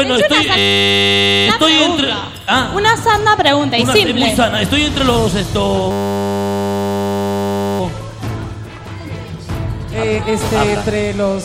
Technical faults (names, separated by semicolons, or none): system hang loop